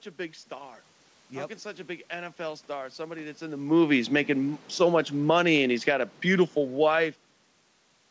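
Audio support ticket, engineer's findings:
Automatic gain falling, 4.69–7.08 s, after "in the movies making". AGC judged input too hot or its background noise too strong and lowered gain about 5 dB. Speech and background drop together.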